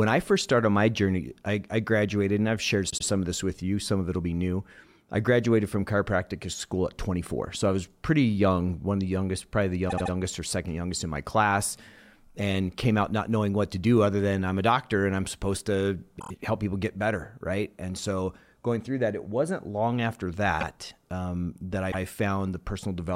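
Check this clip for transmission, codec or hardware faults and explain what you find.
The speech has five stutters from repeated frames. At 2.89 to 3.05 s a 78 ms block replays twice, at 9.89 to 10.12 s a 78 ms block replays three times, and at 16.18 to 16.30 s a 26 ms block replays four times. At 20.60 to 20.65 s a 52 ms block repeats once, and at 21.91 to 22.01 s a 104 ms block repeats once. Each repeat is heard as a stutter. The blocks fit 26 ms compressed frames that were stored or sent more than once, and each repeat lengthens the audio by the replayed time.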